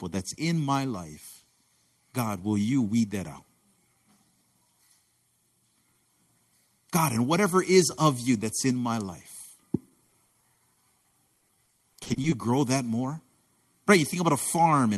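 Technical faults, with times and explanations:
10.07–12.34 s, repeated packet loss (robotic sound): audio packets kept going missing or arriving late across this stretch, about a couple of dozen holes, none longer than 40 ms. Each was patched by stretching the previous sound, filling roughly 480 ms while about 440 ms was lost outright, so around a fifth of the span is concealment. The speech turns choppy, with fragments gone, until just before "grow that more".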